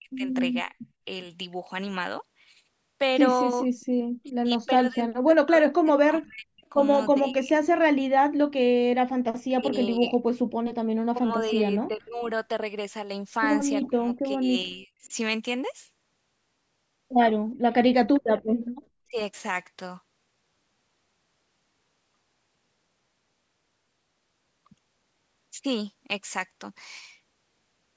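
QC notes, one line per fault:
0.00–1.06 s, 3.63–7.77 s, 9.56–12.28 s, 13.88–15.10 s, 19.08–19.17 s: speech suppressed in double talk. The speech dips or cuts out in pieces, by roughly 20 to 40 dB, likely because the echo canceller attenuated the near talker during overlapping speech.
3.80–3.85 s, 18.65–18.71 s: echo leak. Brief scraps of a delayed copy of the speech, 415 ms late and roughly 35 dB down, likely residual loudspeaker echo passed back by an incomplete canceller.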